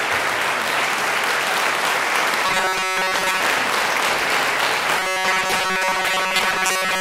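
From 2.46 to 3.40 s, and from 5.00 s to the end, the sound becomes a rigid metallic buzz at 188 Hz. This is robotic sound from repeated short buffers. Audio likely arrived too seldom. A 5.3 ms slice looped, replacing most real audio.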